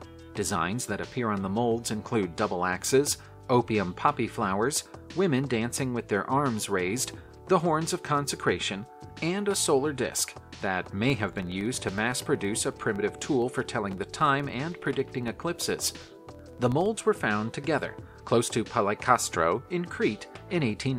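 From 11.10 s to 17.13 s a fast, regular ticking sits under the sound, close to a low buzz at about 21.5 Hz, and it rises and falls with the level of the audio. This is a filter restarted on every block: the filter loses its stored state at each block boundary and starts again from silence, so every block opens with a small transient. The repeat rate fits a 2048-sample block.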